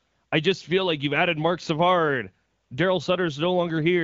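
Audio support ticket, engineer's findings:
No faults found in this speech clip. The AMR wideband (HD Voice) codec path is audible at what sounds like 12.65 kbit/s, with light coding texture and clear speech.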